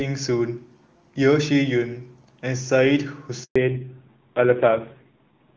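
At 3.44 s a handover gap interrupts the call: no speech frames arrive while the link switches networks, so the sound drops out for 120 ms until 3.56 s. From 3.56 s to the end, a fallback to narrowband replaces HD Voice with AMR-NB, likely at a low rate near 5.9 kbit/s. Everything above 4 kHz disappears, leaving the speech duller and rougher than the clear wideband sound before the switch.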